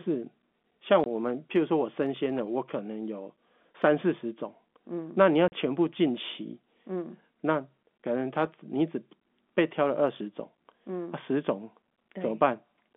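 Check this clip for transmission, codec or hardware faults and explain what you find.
Two dropouts from packet loss filled with silence, at 1.04 to 1.06 s and 5.48 to 5.52 s. The speech cuts to dead silence for 20 ms and then 40 ms, which fits one and then two lost 20 ms packets. With no concealment, the receiver plays zeros where the audio should be, so each gap starts and ends abruptly. The narrow telephone band of the G.711 coding carries the speech around these holes.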